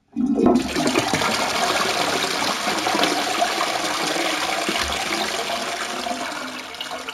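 Imaging from linear upsampling runs throughout. The sound appears to have been raised from a 16 kHz rate to 44.1 kHz by straight-line interpolation, which dulls the top of the original band and leaves a mirrored copy in the 8 to 16 kHz region, roughly 20 dB down, heard as a faint metallic shimmer on bright content.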